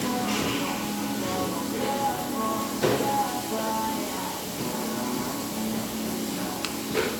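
A short recording of sounds with no audible technical faults anywhere in it.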